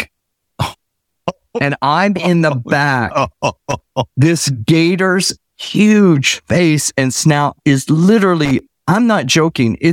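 Speech with two bursts of loose connector crackle, at 3.70–3.84 s and 8.45–8.59 s, just after "face and snout is". A worn contact chopping the signal makes an irregular scratchy burst, unlike a single clean digital click.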